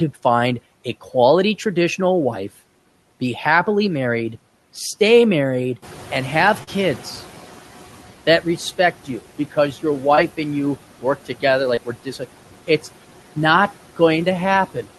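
Speech recorded in a room with background noise, carried over a call path whose top end stops near 12 kHz, consistent with Opus at around 32 kbps. Noise suppressor artifacts run through the whole clip. The suppressor pulls down the bands it judges to be steady noise by about 12 dB, frame by frame, so the background dips in the gaps and swells back under the speech. At around 6 s the room noise jumps by roughly 12 dB, and the noise suppressor is caught catching up from 5.82 to 7.55 s. Its noise estimate still reflects the quieter background, so the louder noise leaks through with less reduction at first. It then settles over about 1.73 s, reaching a cut of about 9 dB as the estimate adapts. Short concealed packet loss appears three times, at 6.63 to 6.69 s, 10.15 to 10.19 s and 11.75 to 11.79 s. The gaps are about 40 ms, 20 ms and 20 ms of missing audio. In each case the receiver extended the preceding sound, using pitch where it was voiced and shaped noise where it was not, then crossfaded back to the real signal. 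Each gap is heard as a brief smear or wobble in the speech.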